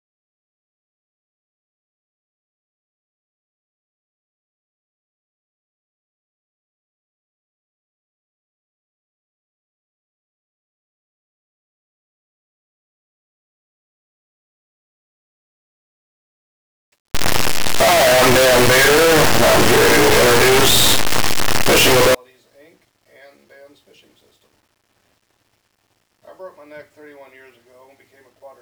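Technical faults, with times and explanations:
17.15 to 22.15 s, signed and unsigned mixed up: loud, harsh distortion where soft sounds become as loud as strong ones, likely 8-bit samples read with the wrong sign convention.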